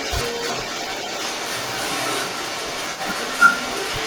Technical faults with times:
0.00-4.06 echo leak

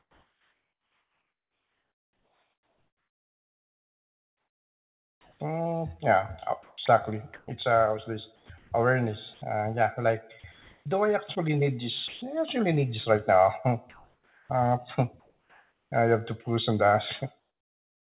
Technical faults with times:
0.00-7.48 sound chopped by the voice detector
8.36-8.50 sound dropped by the voice detector
8.36-9.42 comfort noise in place of the background
10.40-10.44 sound dropped by the voice detector
10.40-10.86 comfort noise in place of the background
12.08-12.22 sound dropped by the voice detector
13.90-15.92 sound chopped by the voice detector

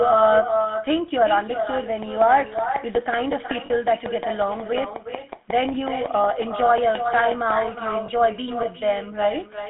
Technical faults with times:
0.00-9.70 echo with no canceller
0.00-9.70 GSM full-rate codec
3.66-3.71 lost GSM frames
8.06-8.09 lost GSM frames

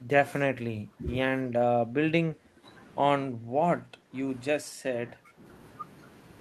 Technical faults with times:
0.00-1.08 speech suppressed in double talk
1.45-1.54 speech suppressed in double talk
1.85-2.66 speech suppressed in double talk
3.28-4.15 speech suppressed in double talk
4.59-5.44 speech suppressed in double talk

